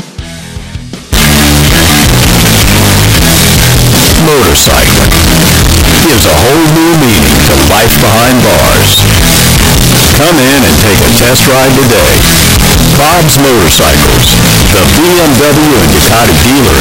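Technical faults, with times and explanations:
1.13 to 16.81 s, float read as integer. At 1.13 s the audio jumps to a very loud, harsh, buzzing level and stays there to the end. The waveform becomes a near-square shape at an almost fixed, high level, whatever the true level. Background noise is as loud as the main sound, yet pitch can still be followed. The likely cause is 32-bit float samples read as 32-bit integers. Sign and exponent bits then set each sample's value.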